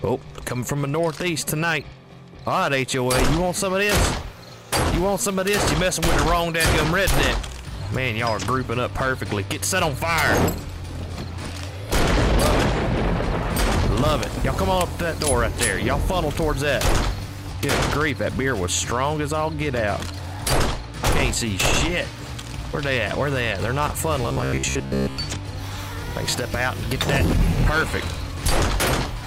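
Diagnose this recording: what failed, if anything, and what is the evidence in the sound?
From 24.23 to 25.17 s the sound becomes a metallic buzz fixed at 66.8 Hz: robotic sound from repeated short buffers, likely at the driver or buffer stage. Playback loops chunks of about 15 ms, so most of this stretch is repeats rather than the silent gaps of a dropout.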